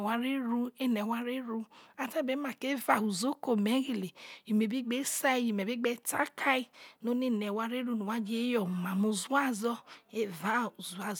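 No technical faults can be heard anywhere in the speech, with the signal holding steady and intact throughout.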